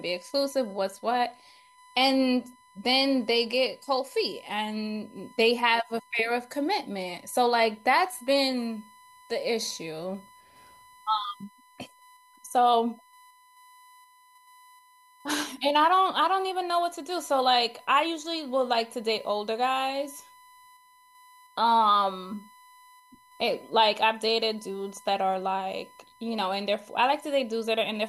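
USB whine runs throughout the speech: a steady 1 kHz tone sitting roughly 30 dB below the voice. The USB bus draws current in 1 ms frames, and that pulsing leaks through shared power or ground into the audio path as a fixed-pitch whine.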